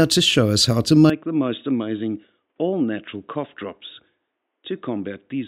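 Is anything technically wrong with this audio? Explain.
Yes. From 1.10 s to the end, the sound changes abruptly. Its top end is gone, with nothing above 3.8 kHz. It turns dull and boxy. The level drops by around 10 dB, and a faint new noise floor appears well below the sound. There is no gap at the change. This is likely an input switched to a poorer device. A lower-grade microphone or headset path passes a narrower band and has its own level and noise.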